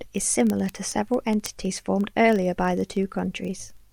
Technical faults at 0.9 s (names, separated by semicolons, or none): word clock ticks